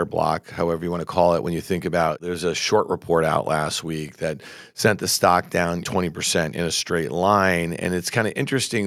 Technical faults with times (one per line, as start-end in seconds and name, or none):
none